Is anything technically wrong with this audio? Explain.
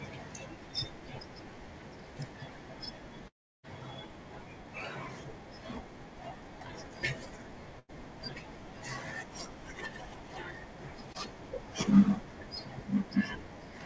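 Yes, the speech has three gaps where audio failed to arrive in time, all carried over a call path whose band stops at 8 kHz, which fits a wideband codec such as G.722 at 64 kbps.

From 3.28 to 3.65 s there is a long network dropout. The sound is briefly held and then falls away to about 0.32 s of near silence, and the speech resumes with roughly 0.36 s missing. The likely cause is a stretch of lost packets the receiver could not bridge. The empty gap is what sets it apart from a shorter concealed burst.

From 7.79 to 7.91 s there is a burst of packet loss, about 100 ms missing. The receiver extended the last sound for most of that gap while fading it, giving a held buzz or dying hiss before speech picks up further on.

From 11.13 to 11.16 s there is a short concealed packet loss, with about 20 ms lost and filled by continuing the preceding sound and blending back in. It comes across only as a quick smear or wobble.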